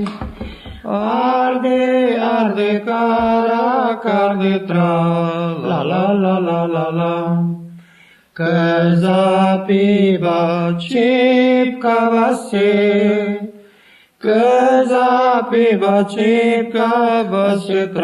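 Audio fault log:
No faults heard anywhere in the recording.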